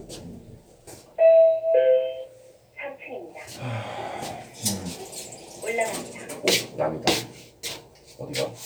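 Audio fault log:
No faults found; the everyday sound shows nothing audible to log.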